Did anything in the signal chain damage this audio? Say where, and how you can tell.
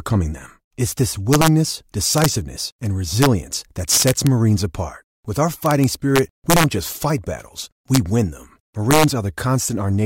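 Yes. Integer overflow in the sample-format or gain stage cracks the speech seven times: 1.33–1.48 s, 2.18–2.26 s, 3.22–3.26 s, 3.92–4.27 s, 5.66–6.64 s, 7.94–7.97 s and 8.91–9.04 s. Loud passages are pushed about 1 to 3 dB past full scale, and instead of being limited, those peaks wrap to the opposite extreme. The result is harsh, violent cracks far sharper than clipping, longest around 5.7–6.6 s and most severe there and at 3.92–4.27 s.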